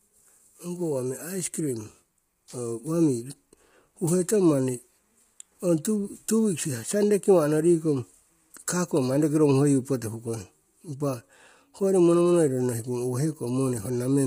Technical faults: low-delay AAC compression

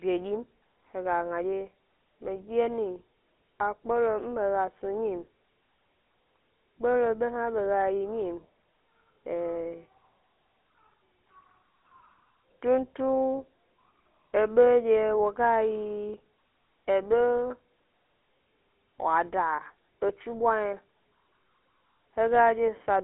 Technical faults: GSM full-rate codec

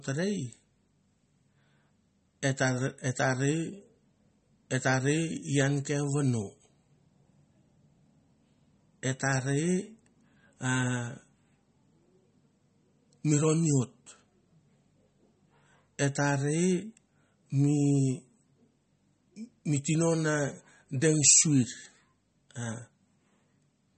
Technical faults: MP3 compression

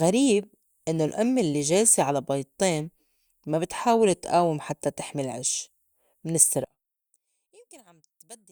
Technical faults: one channel inverted

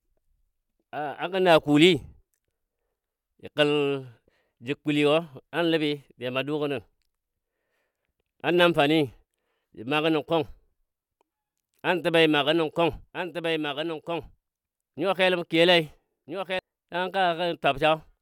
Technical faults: doubled audio track

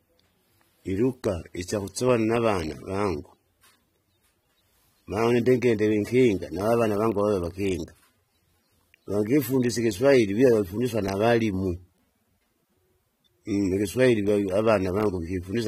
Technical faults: AAC compression

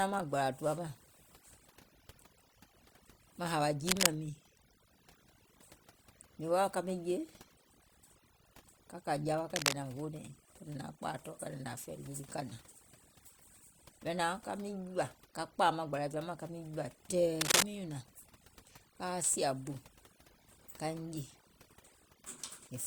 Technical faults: overdone noise removal; cable scratch noise

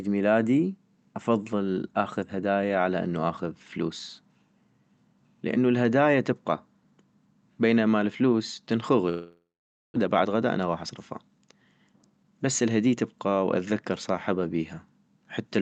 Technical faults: long network dropout; jitter buffer speed-up

